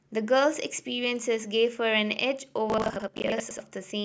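Speech, with a burst of processor overload crackle from 2.7 to 3.6 s. Across that stretch the audio tears into gritty fragments: the system repeatedly misses its deadlines, and each late buffer is filled with a short piece of old audio that butts against the next with hard edges. The fragment spacing fits buffers of about 20 ms, with about 30 missed across the stretch. That sustained, clustered run separates it from a single isolated dropout or click.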